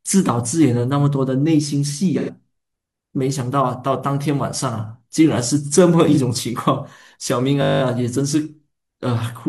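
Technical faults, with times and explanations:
2.18 to 2.30 s and 6.11 to 6.16 s, AAC frame loss with concealment: Brief smeared, noisy patches about 85 ms and 43 ms long, which fits two lost frames and then one. The decoder rebuilt the missing stretch from the last good spectrum instead of playing the real audio.
7.62 to 7.82 s, system hang loop: A steady 50 Hz buzz. The system froze while the sound hardware kept replaying the same 20 ms of audio ten times over, and playback then picked up again with essentially nothing skipped.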